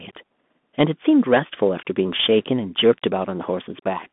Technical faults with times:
0.00-4.12 Bluetooth CVSD headset codec

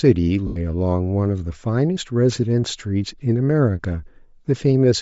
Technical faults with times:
0.00-5.02 Bluetooth LC3 compression
0.47-0.57 lost LE Audio frames

